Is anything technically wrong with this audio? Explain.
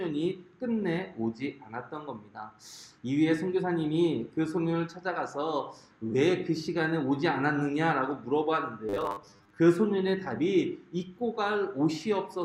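Yes. From 8.89 to 9.58 s: robotic sound from repeated short buffers. The sound becomes a rigid, metallic 100 Hz buzz. A 10 ms repeat likely replaces about half the audio.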